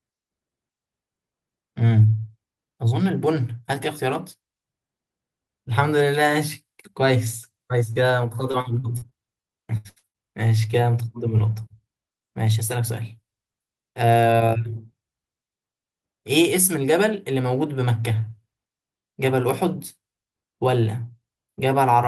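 Short concealed packet loss at 7.93 to 7.97 s in this speech clip: about 20 ms of audio arrived too late, and the decoder extended the preceding sound across the hole, leaving a brief smear. Repeated packet loss (robotic sound) follows from 8.51 to 10.16 s, with a string of concealed gaps up to 75 ms long filling about a quarter of that stretch, so the speech turns choppy.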